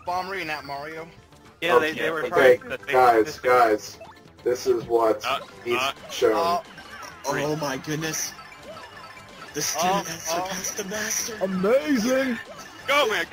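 No technical faults can be heard in this recording.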